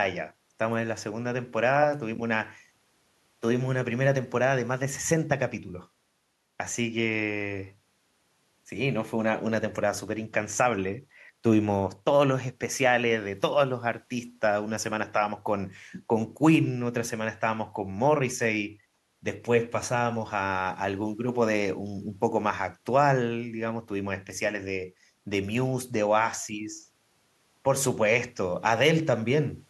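No technical faults can be heard anywhere in the speech recording; the signal stays continuous and stable throughout.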